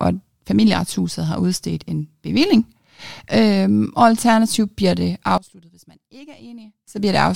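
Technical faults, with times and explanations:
5.38 to 6.87 s, one channel inverted: in the mono sum the speech suddenly drops by about 23 dB and turns faint, then returns at full level. The likely cause is reversed polarity on one stereo channel. The material common to both sides, which carries the centred speech and the background, cancels, leaving only the small difference between left and right.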